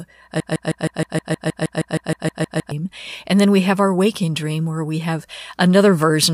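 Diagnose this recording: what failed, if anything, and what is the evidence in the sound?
There's a broken-record loop from 0.40 to 2.71 s: one 157 ms piece of the speech repeats back to back, fifteen times, and the speech that should have filled that stretch is simply gone. That's most likely a stalled playback buffer or stream re-sending the last chunk it held.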